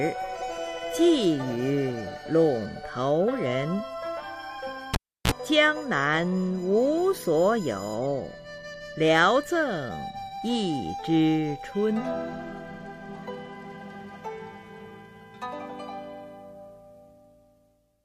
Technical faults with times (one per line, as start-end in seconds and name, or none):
4.94-5.31 cable pulled and plugged in